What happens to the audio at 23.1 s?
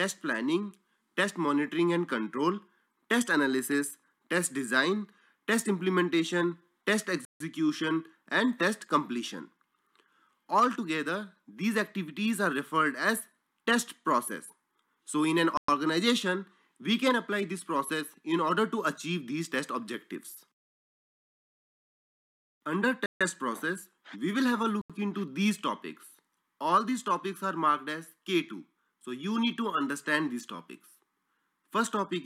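The sound drops abruptly to silence from 23.06 s to 23.21 s, a gap of about 147 ms, and then playback resumes. This is a Bluetooth stall, likely caused by radio interference that delayed packets on their way to the headphones. With nothing new arriving, the headphones' small playback buffer emptied, so the output simply stopped rather than glitching. It restarted only once the retransmitted packets got through and refilled the buffer.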